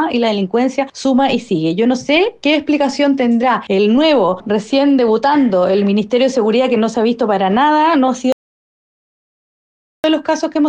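The input signal likely dropped out, through a lost device link or an unintended mute, while the recorder kept writing zeros. The result is an audio dropout to silence from 8.32 s to 10.04 s: the sound cuts off abruptly, about 1.72 s is gone entirely, and the gap holds no room tone before the audio resumes mid-flow.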